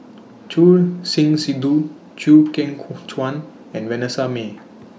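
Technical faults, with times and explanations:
No technical faults can be heard in this speech recording. Nothing in the audio calls for a timed entry.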